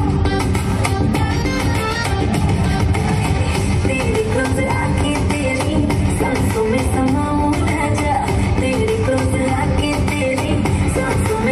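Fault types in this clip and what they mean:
Compressed frames skipped: whole coded frames go undecoded, so the sound jumps ahead twice, by roughly 50 ms and 20 ms.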